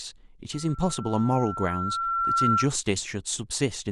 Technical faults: loudspeaker feedback squeal

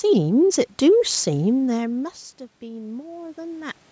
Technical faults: automatic gain rising

